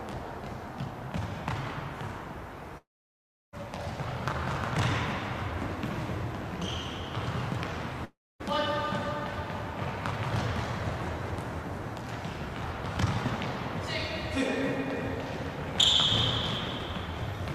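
At 2.77 s the sound smears into a fading buzz, then goes quiet until 3.55 s, about 0.76 s gone, most of it silence. At 8.05 s the same happens for about 0.36 s. Both sound like a likely long network dropout, with lost audio never recovered.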